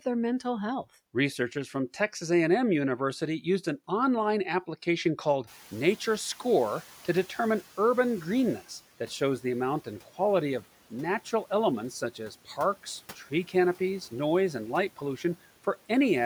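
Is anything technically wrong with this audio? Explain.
Yes. From 5.47 s, just after "an online application called", the room noise jumps by about 21 dB and the noise suppressor catches up slowly. Its noise estimate lags, so the noise first passes with less reduction, then sinks by about 8 dB over 3.18 s, settling by 8.65 s, before "that shows the amount".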